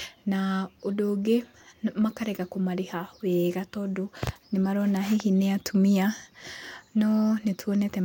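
Nothing technically wrong turns up anywhere in this bit of speech, so there's nothing here to flag.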